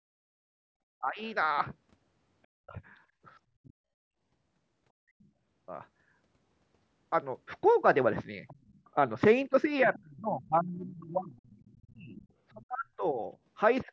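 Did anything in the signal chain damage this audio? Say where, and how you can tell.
Yes. The damage sits in the call processing stage, in its echo cancellation. The speech level dips by roughly 15 dB from 1.0 to 1.22 s, drops much deeper, by roughly 40 dB, between 2.52 and 3.74 s, and falls again by roughly 35 dB from 9.85 s to the end. This is likely speech suppressed in double talk: the canceller turned the near talker down while the far side spoke. Unlike packet loss, the gaps line up with far-side activity.

A second, fainter voice also comes through at 5.21 to 5.28 s, 8.48 to 8.8 s, and 9.83 to 12.27 s. It sits roughly 30 to 40 dB below the main speech, and it arrives in short scraps and one longer stretch. This is likely the other side's voice leaking through: loudspeaker playback reached the microphone and was not fully cancelled. It differs from crosstalk in the wiring because it overlaps the suppression near 10 s, when the canceller was struggling. 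The band limit near 8 kHz is ordinary call filtering.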